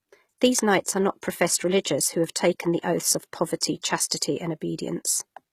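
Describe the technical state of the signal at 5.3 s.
At 5.3 s the speech carries the same HE-AAC compression damage heard across the whole clip. The likely cause is spectral band replication: the treble is copied up from lower bands rather than coded. This leaves sibilants gritty and metallic, with nothing above 14.9 kHz, consistent with a stream of around 20 kbps.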